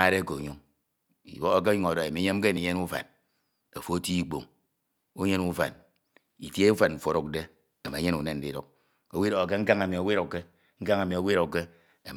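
At 2.57 s and again at 10.53 s the speech jumps ahead, a brief skip of around 20 ms with the two sides butted together. That's likely audio missing between chunks, with the recorder dropping a sliver at its roughly 4-second block boundaries.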